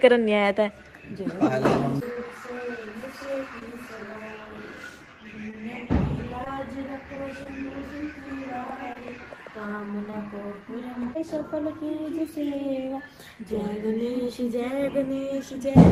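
Short concealed packet loss at 2.13, 3.59, 5.51, 6.44, 7.43, 8.93 and 10.10 s: each time about 20 ms of audio was lost and filled by extending the preceding sound, leaving a brief smear or wobble.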